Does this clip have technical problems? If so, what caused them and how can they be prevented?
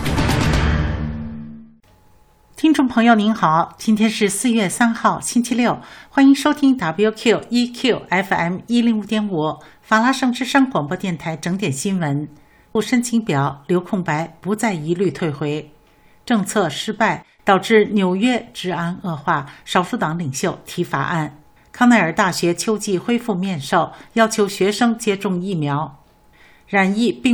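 Yes. There is a stream segment skip at 12.75 s, where the sound jumps abruptly forward with a small blip and the continuity of the programme breaks. The likely cause is a segmented stream in which one chunk failed to arrive or decode in time, so the player dropped it and carried on with the next. Prevent it by buffering further ahead and retrying failed segment requests before playback reaches them.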